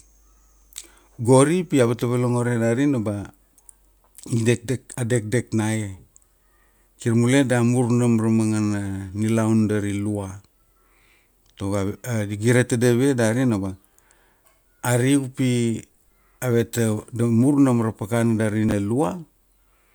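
At 18.69 to 18.72 s, chunks out of order: one 10.67 ms chunk landed two chunks late, briefly jumbling the speech across three hard joins.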